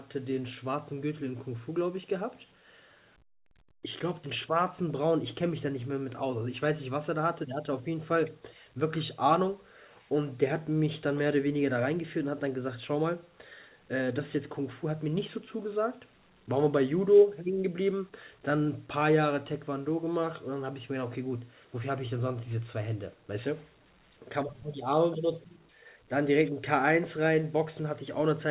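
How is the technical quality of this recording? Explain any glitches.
No glitches can be heard anywhere in this speech recording.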